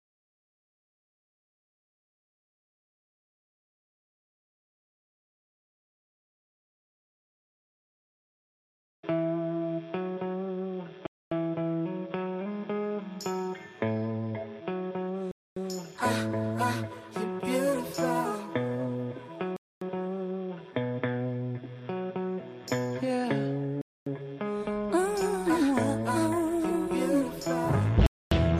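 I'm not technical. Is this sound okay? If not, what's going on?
No. The audio was delivered in 4-second pieces with a quarter-second of silence between them, a gap between chunks. Nothing is lost, but the sound stops abruptly at 11.06, 15.31, 19.56, 23.81 and 28.06 seconds, then resumes.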